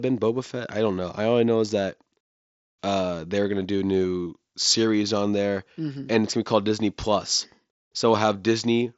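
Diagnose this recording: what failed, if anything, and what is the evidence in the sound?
Nothing failed: the speech comes through the Bluetooth mSBC headset path as that path normally sounds, and the sound gives no evidence of any fault.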